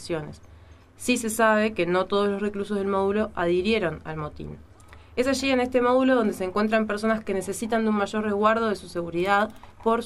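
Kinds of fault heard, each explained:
No faults can be heard anywhere in this clip.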